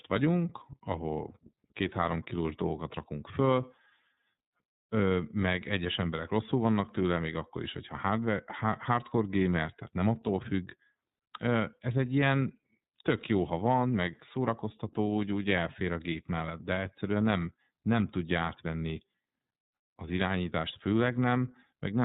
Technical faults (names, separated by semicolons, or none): iLBC codec